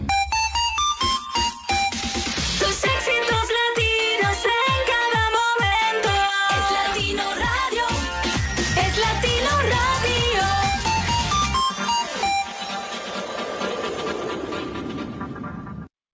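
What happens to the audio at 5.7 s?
Nothing goes wrong at 5.7 s: the audio plays through intact, carrying only the steady 8 kHz band limit of the wideband call codec it passed through.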